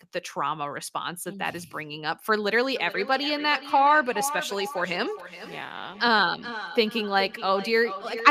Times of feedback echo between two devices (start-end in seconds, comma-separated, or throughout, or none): 2.76-8.31